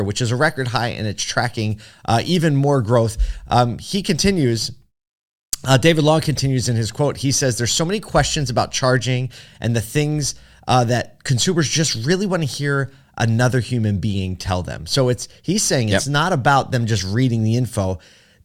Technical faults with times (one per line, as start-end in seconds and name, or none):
none